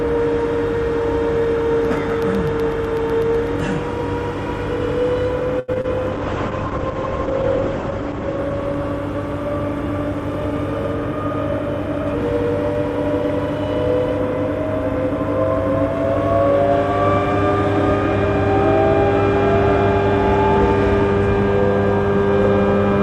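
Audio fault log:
1.85–3.72 s, periodic USB or driver dropouts: about fifteen tiny silent gaps, each a fraction of a millisecond, repeating every 0.125 s. Something's stalling the USB bus or audio driver on a fixed schedule, so you get evenly spaced ticks through this stretch.
5.59–5.86 s, repeated packet loss (robotic sound): three gaps in quick succession, the longest 87 ms. Concealment stretched the last sound over 124 ms, covering 47% of the span, and 60 ms simply went missing, so it comes out choppy with chunks gone.
6.13–9.97 s, call bitrate drop: the bandwidth estimate fell and the encoder went from 64 kbps down to 9 kbps, sitting at the bottom for 1.76 s. Bandwidth shrank from 20 kHz to 8 kHz, so the sound gets coarser and loses its top end before recovering.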